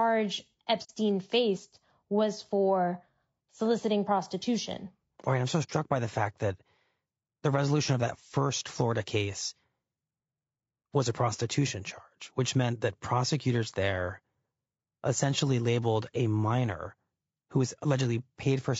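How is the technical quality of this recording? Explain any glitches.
The recording's quality is limited by plainly audible low-bitrate coding throughout, and it has two brief dropouts.

Low-delay AAC compression runs through the whole clip. The speech sounds rough and grainy, with noise filling the gaps between harmonics and a thin, somewhat synthetic top band. This is likely AAC-ELD at around 32 kbps, where short frames resolve pitch harmonics poorly.

AAC frame loss with muting occurs at 0.83–0.90 s, just before "faced was for soliciting", and at 5.63–5.70 s, between "right I'm so" and "by the fact that". Each gap lasts about 60 ms, which fits a couple of lost frames. Their spectrum was zeroed, and the overlapping windows fade the sound out and back in, leaving a soft-edged hole.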